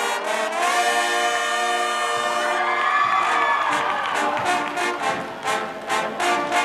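From 2.62 s to the end, a mains buzz sets in. Sharp switching spikes on a 50 Hz supply leak into the signal twice per cycle. Their harmonics climb into the kilohertz range. The result is a steady, raspy buzz, well below the sound.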